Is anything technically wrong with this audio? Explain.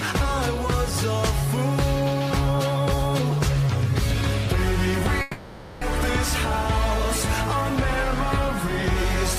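Yes. From 5.21 to 5.83 s there is a long network dropout: the stream likely stopped delivering data, so about 600 ms of audio was lost. The receiver stretched the last sound into a fading buzz across the gap, and the audio then resumes with that stretch missing.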